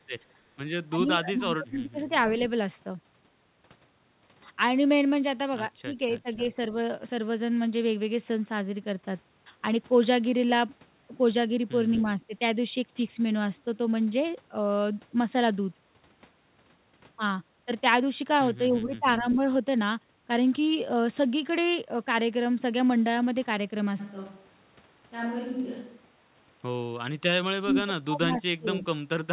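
At 0.9 to 1.98 s the speech dips by up to about 20 dB in patches. This is speech suppressed in double talk, likely an echo canceller ducking the talker while both sides spoke. It recurs more shallowly, about 10 dB, at 5.83 to 6.43, 11.97 to 12.33 and 18.83 to 19.39 s, and deepest, about 30 dB, at 27.6 to 28.85 s. The waveform shows notched, hollowed envelope segments, and the spectrogram shows energy thinning or gapping across the band.

Echo leak overlaps these. A faint copy of the voice trails 245 ms behind, about 20 dB down, at 1.25 to 1.42, 18.96 to 19.35 and 27.71 to 28.81 s. A brief scrap at 6.15 to 6.19 s sits about 30 dB down. The cause is likely an incompletely cancelled loudspeaker pickup. On a spectrogram it appears as a faint, shifted repeat of the preceding harmonics.

From 24.01 to 26.98 s there is a switch to a distant microphone, likely because the close microphone dropped out. 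The voice turns roomy and hollow, about 5 dB quieter, with room noise rising to about 30 dB below speech. The spectrogram shows a raised noise floor, smeared reverberant tails and weaker low end, with abrupt boundaries at both ends. Throughout, the band stops at 4 kHz, consistent with the narrowband call codec.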